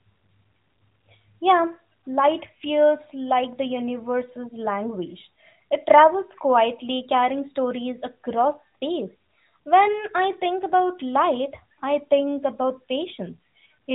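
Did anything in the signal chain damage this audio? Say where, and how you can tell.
No, nothing in the chain damaged this speech. It has passed through the AMR narrowband mobile codec, which removes everything above about 3.8 kHz and adds only a light coloration, consistent with the highest-quality 12.2 kbps mode.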